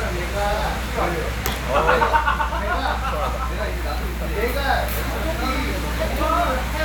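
A ground loop or nearby transformer is coupling the 60 Hz power line into the signal for the whole clip, producing mains hum: a steady low drone with some low harmonics, sitting only a few decibels below the sound itself and clearly audible beneath it.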